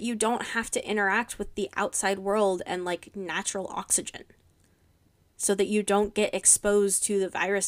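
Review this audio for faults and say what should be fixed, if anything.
No faults turn up in this audio, so nothing needs to be fixed.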